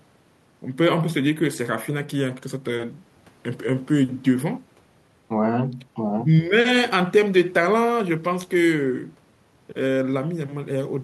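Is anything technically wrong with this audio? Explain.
No, there's nothing technically wrong with this recording.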